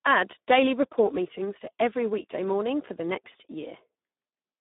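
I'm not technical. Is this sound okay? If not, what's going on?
No. Speex codec damage runs from start to finish. This older internet-calling speech codec is squeezed very hard here, so the speech comes out hoarse and noisy, and nothing above about 3.8 kHz survives, leaving a thin, telephone-like sound.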